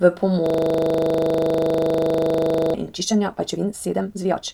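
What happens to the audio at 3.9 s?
A time-stretched section runs from 2.94 s to the end, and it likely comes from software squeezing the speech to about 1.86 times speed by dropping short pieces so the pitch stays, which makes it sound rushed.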